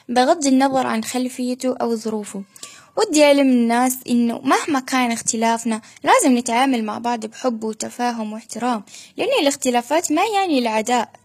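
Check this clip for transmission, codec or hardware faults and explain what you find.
There is one fault, running through the whole speech clip.

HE-AAC compression, throughout: nothing reaches above 14.9 kHz, and the treble sounds synthetic, likely rebuilt by spectral band replication from copied lower bands, which fits HE-AAC v2 at roughly 20 kbps. The damage is plainly audible: s sounds come out gritty, metallic and lispy.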